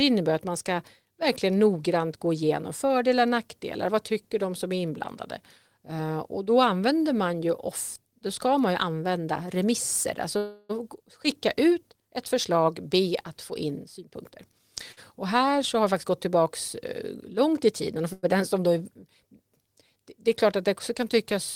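A held, buzzy smear of sound interrupts this speech recording twice, from 10.37 to 10.71 s and again from 18.13 to 18.25 s. Each time the last sound is drawn out into a fading buzz for roughly a third of a second and then a tenth of a second, and the talk resumes exactly where it broke off, with nothing skipped and no true silence in between. These are call audio freezes, likely caused by packets held up in transit: the jitter buffer drained, the receiver kept extending the final sound to cover the wait, and the late audio was played on arrival, adding about 320 ms and 100 ms of delay. Between 13.99 and 14.60 s the speech turns hurried, running at about 117 percent of normal speed while the pitch stays put. This is a jitter buffer speed-up: with more audio queued than it wanted, the receiver cut out short pitch-period slices over and over, about a tenth of a second in total, to bring the delay back down. 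Just after, at 14.92 to 14.99 s, a single sound hangs on slightly too long with a faint buzz, a short stall from a late packet. One packet was missing when due, so the receiver stretched the sound by 49 ms until it arrived, then carried on with nothing lost.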